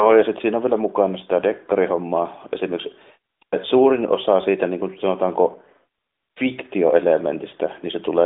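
No technical faults can be heard in the speech, which carries the band-limited character of the AMR narrowband mobile codec on a phone line: content runs from 250 Hz to 3.7 kHz with nothing above 3.8 kHz, and the light codec texture fits its 12.2 kbps top mode.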